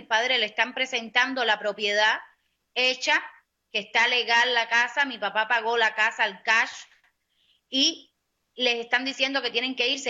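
Nothing in this recording stands out as a technical problem; it just runs along without a hitch.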